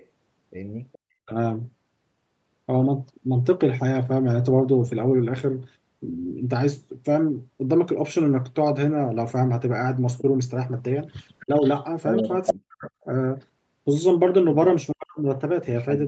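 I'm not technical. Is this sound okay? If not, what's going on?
No. Two problems can be heard in this speech.

Echo leak: a delayed second copy of the voice, trailing about 0.42 s behind, is faint from 0.0 to 0.98 s, briefly at 10.18–10.22 s, and nearly as loud as the voice from 11.4 to 13.04 s. The likely cause is a loudspeaker on the other end being picked up by its microphone. What sets it apart is that something extra is added.

Speech suppressed in double talk: here the voice itself is taken away instead, dipping or dropping out at 1.25–1.34 s, at 11.46–12.91 s, and from 14.91 s to the end. This likely happens because the echo-cancelling system, faced with both sides talking at once, turns down everything.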